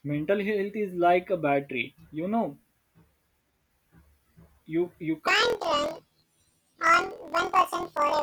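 From 5.27 s to the end at 8.22 s, the speech jumps an octave higher and takes on a rapid flutter at about 41.7 Hz. This is planar audio read as interleaved. Each 24 ms block stores all left samples and then all right samples, but it is read as alternating pairs, so the block plays twice at double speed, first left and then right. Unlike a sample-rate mismatch, the pace stays normal, and the flutter locks to the block rate.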